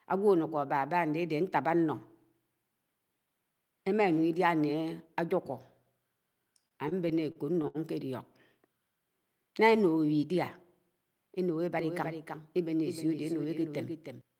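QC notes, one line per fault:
6.68–7.77 s, repeated stalls (stutter): the speech stalls nine times in just over a second, with the longest hold about 71 ms and roughly a fifth of the span filled in, about 202 ms in all, yet nothing is lost. Packets reached the receiver late or too slowly, so its jitter buffer kept running dry and it stretched the last sound each time. On a spectrogram this shows as short smeared, flat-topped patches breaking the normal syllable flow. The waveform shows brief repeated sustains.
11.79–14.21 s, doubled audio track: a second full-band copy of the speech runs about 300 ms behind, roughly 5 dB below the original. It lacks any decay or room colour and switches on and off abruptly at the range edges. It is likely a second, slower capture path mixed back in. A spectrogram shows every syllable's pattern repeated at a fixed offset. The waveform shows overlapping, offset envelopes.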